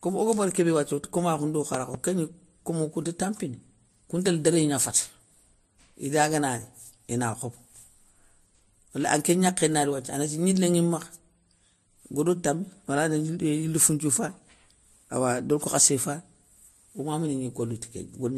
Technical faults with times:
0.00-18.38 transcoding between lossy codecs
1.74-1.97 loud pop

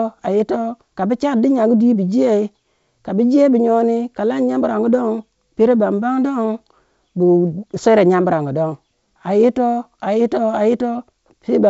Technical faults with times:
none

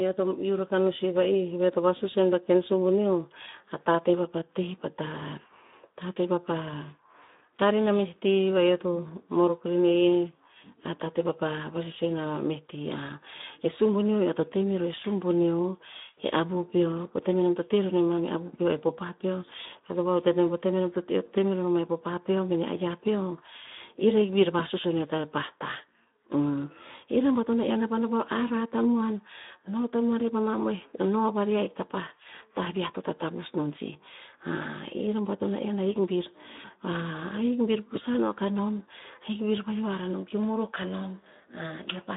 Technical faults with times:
0.00-42.17 Speex codec

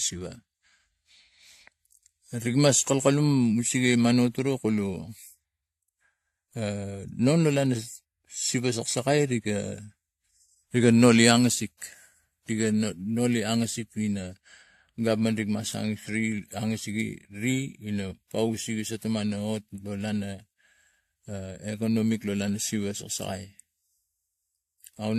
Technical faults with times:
0.00-25.19 transcoding between lossy codecs

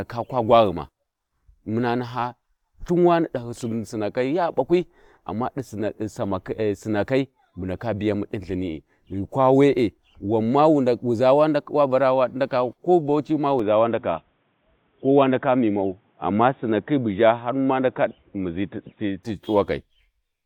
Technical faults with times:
13.59-19.23 input switched to a poorer device

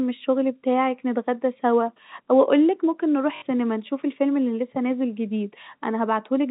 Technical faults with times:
3.36-3.42 packet loss with last packet repeated

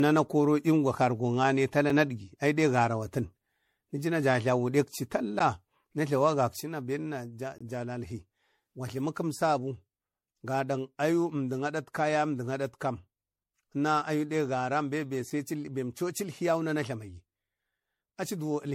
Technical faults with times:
0.00-18.75 generation loss
1.90 block of digital silence
5.39 block of digital silence
6.61-18.75 one channel drops out
7.58-7.61 block of digital silence
15.30 block of digital silence

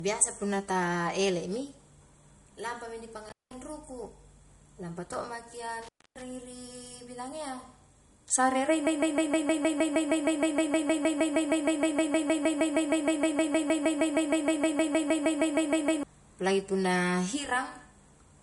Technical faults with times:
0.00-18.42 low-bitrate audio saved at a high bitrate
3.29-3.54 intermittent contact
5.82-6.22 intermittent contact
8.87-16.03 broken-record loop

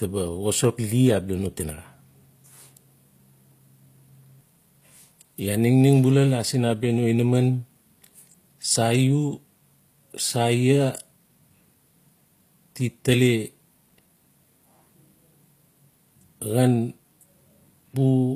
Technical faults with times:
0.00-18.35 low-bitrate audio saved at a high bitrate

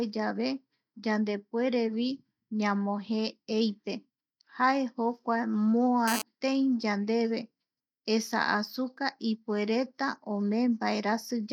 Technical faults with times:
6.08-6.22 GSM phone buzz

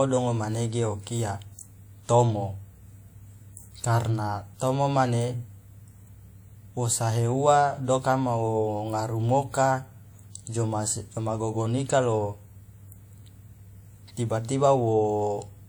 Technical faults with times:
0.13-15.68 clock slip clicks

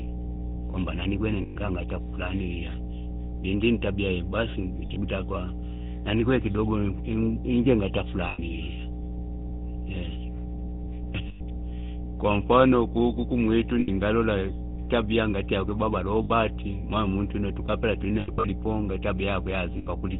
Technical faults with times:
0.00-20.20 mains hum
0.00-20.20 GSM full-rate codec
1.42-1.56 lost GSM frames
4.86-5.02 lost GSM frames
8.28-8.39 lost GSM frames
11.28-11.41 lost GSM frames
13.80-13.89 lost GSM frames
16.24-16.31 lost GSM frames
18.20-18.45 lost GSM frames
19.78-19.87 lost GSM frames

